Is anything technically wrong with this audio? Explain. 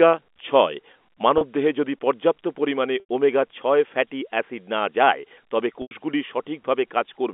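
Yes. There is packet loss with pitch repetition at 1.38 to 1.41 s, 3.00 to 3.04 s and 5.82 to 5.91 s. About 30 ms went missing first, which fits one lost packet, then about 90 ms twice. The receiver looped the last pitch period to fill each gap, so the sound briefly holds with a buzzy, frozen quality. In the longer gaps it fades before resuming, all within the narrow G.711 telephone band.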